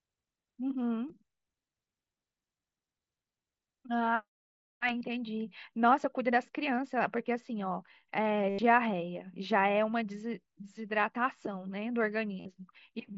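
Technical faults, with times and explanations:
1.08, 5.00, 8.49–8.59 and 12.40–12.46 s: concealed Bluetooth headset packet loss. Missing audio is patched by repeating recent waveform. The longest gap buzzes steadily, then warbles as real sound returns.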